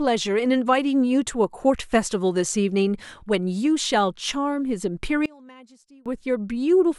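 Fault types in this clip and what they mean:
One channel inverted: From 5.26 to 6.06 s the speech drops by about 27 dB and nearly disappears. What remains is faint, with the centred part of the sound largely gone. The likely cause is one stereo channel with reversed polarity. When both channels are summed to mono, the material they share cancels out. Only the small difference between them survives. Full level returns after 6.06 s.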